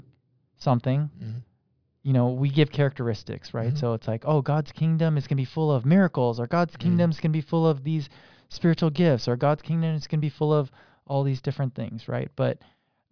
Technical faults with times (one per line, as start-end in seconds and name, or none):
none